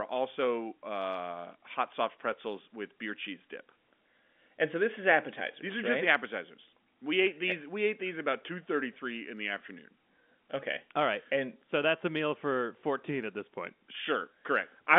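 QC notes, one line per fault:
No faults are heard in the speech. The sound is held to a narrow telephone band from about 200 Hz to 3.5 kHz, which fits G.711 A-law telephone coding, with at most a faint level-following quantisation hiss.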